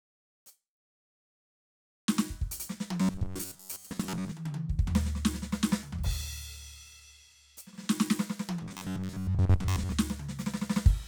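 From 3.01 to 4.31 s and again from 8.62 to 9.92 s, the music turns into a rigid, metallic buzz at 93.8 Hz: robotic sound from repeated short buffers, likely from replaying a roughly 10.7 ms fragment when most new audio arrives too late.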